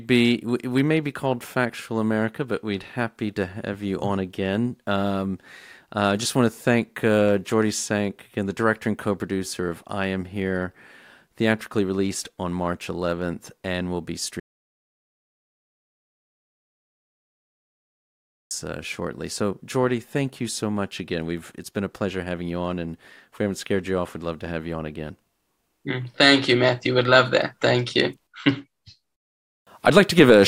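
A speech recording that cuts out abruptly at 14.40 s and stays in total silence until 18.51 s, a gap of about 4.1 s with no room tone or background hiss at all, before the speech resumes mid-flow. That dead-flat gap is an audio dropout to silence: the input signal was likely lost, through a disconnected device, a failed link or an accidental mute, while the recorder kept writing silence, so whatever was spoken during those seconds is gone.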